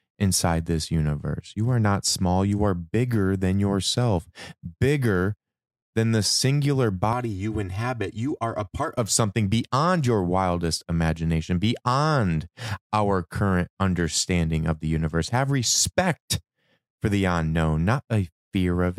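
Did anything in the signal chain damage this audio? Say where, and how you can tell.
Yes. From 7.13 to 8.98 s, just after "bigger than the singular" and ending before "of something beyond your", the speech turns hollow and phasey, thinned by fixed notches starting around 150 Hz and repeating evenly up the spectrum. That is channel delay (comb filtering) at the driver or buffer stage. One channel arrives roughly 3 ms late, and when the pair is summed to mono, the shared content cancels at those regularly spaced frequencies.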